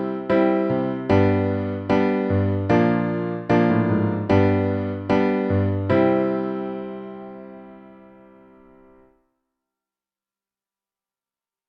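No technical faults can be heard anywhere in the recording, and the signal stays steady and intact throughout.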